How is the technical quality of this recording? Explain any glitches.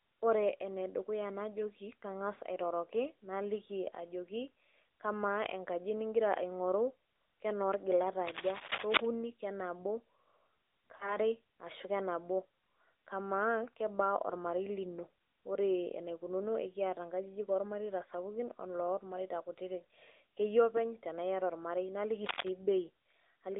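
The speech has been through a low-rate mobile phone link, with audible codec damage throughout and three short glitches.

Throughout, the speech sounds thin and buzzy, with a synthetic edge. Nothing below about 300 Hz or above about 3.7 kHz comes through. This is the AMR narrowband mobile codec. It rebuilds speech from a vocal-tract model driven by sparse pulses, so fine detail is lost. The buzziness points to a middling bitrate around 10 kbps.

From 8.26 to 9.05 s, just after "aing'oru kenoolgilat", a dense, uneven scratching or rustling sits a little louder than the speech. At 22.24 to 22.49 s a shorter burst of the same cable scratch noise is heard at about the speech's own level. The likely cause is a worn cable or connector being moved, so that its contact resistance jumps rapidly and injects bursts of noise.

From 10.96 to 11.17 s, just before "ashu kenabo", the sound smears into a drawn-out warble that sags in level, then returns slightly rough. 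This is lost AMR speech frames. About 40 ms of data went missing, which fits two 20 ms frames. The decoder filled the gap by repeating its last good pitch and vocal-tract settings at falling gain.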